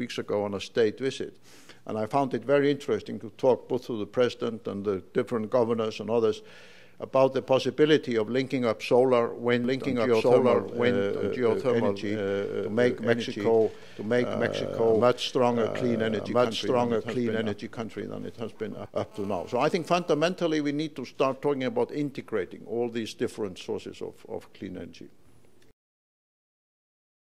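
From 9.64 s to 18.86 s there's a doubled audio track: a second full-band copy of the sound runs about one and a half seconds behind the original, at roughly the same level. It's dry, with no decay or room colour, and it cuts in and out abruptly at those edges. The likely cause is the audio being picked up again through a slower path, or an edit leaving two copies out of step.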